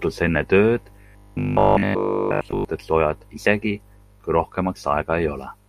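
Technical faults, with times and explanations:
1.01 to 2.65 s, robotic sound from repeated short buffers: new audio likely stopped arriving in time, so playback kept looping the last 20 ms chunk while the real speech in between was dropped, and practically the whole stretch is made of these repeats. Looping a 20 ms piece imposes a fixed 50 Hz buzz on everything, so the voice turns flat, metallic and machine-like, following the rough shape of the speech.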